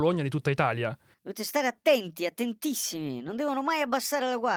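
Nothing goes wrong anywhere in this bit of speech, so there's no fault to point to at any moment.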